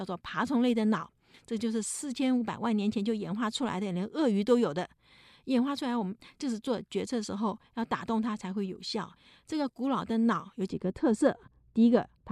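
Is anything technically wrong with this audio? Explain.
Yes. From 10.70 s to the end at 12.32 s, the speech turns dull and muffled, its treble smoothly rolled away. This is de-emphasis applied wrongly: a treble-cutting filter acted on audio that carried no matching pre-emphasis, leaving 10 kHz about 11 dB below 1 kHz.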